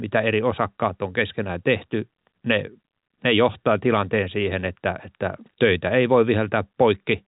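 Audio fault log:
No faults heard; telephone-band speech up to 3.8 kHz.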